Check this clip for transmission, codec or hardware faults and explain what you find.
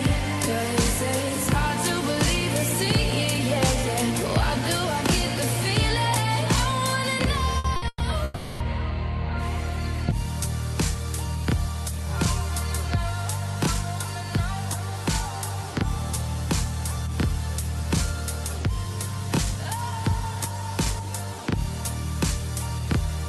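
Yes, there are transmission faults, all packed between 7.6 and 8.6 seconds, on an Opus call path whose audible band stops near 12 kHz.

Burst of packet loss, three times: 7.58 to 7.67 s, 7.76 to 7.85 s, and 7.88 to 8.03 s. Packets went missing, so the receiver stretched the last sound for 60, 60, then 120 ms. Each sounds like a brief held buzz or hiss, then a jump. The third fades into 30 ms of silence.

Long network dropout, 8.24 to 8.63 s. The cause is likely a network outage. For 0.36 s the receiver keeps extending the last sound, which thins as it goes but never reaches silence. Then the audio resumes further on, with that stretch gone.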